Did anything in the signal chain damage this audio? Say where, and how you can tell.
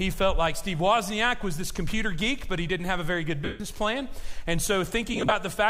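Yes, at the Bluetooth link: lost LE Audio frames, where the LC3 decoder concealed the gaps. From 3.45 to 3.60 s, about 150 ms of the sound becomes a grainy smear that decays gradually toward silence. From 5.13 to 5.32 s, about 105 ms of loss is scattered in very short bursts, giving a noisy smear. Unlike a plain dropout or a click, the gaps are filled by the reused spectrum with random phase, fading out.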